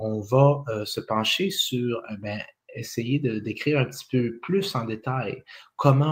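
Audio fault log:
Throughout, noise suppressor applied to music or sounds: a speech-tuned suppressor treats held tones and tails as noise, ducking them by around 5 dB, so the sound pumps and thins.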